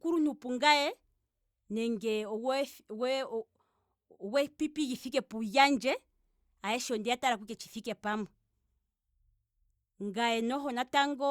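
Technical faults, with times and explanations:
No technical faults can be heard in this speech recording. There is nothing here to time or explain.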